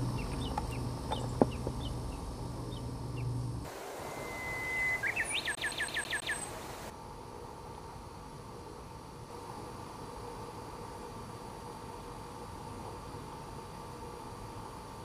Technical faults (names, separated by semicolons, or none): CD stuck on one turn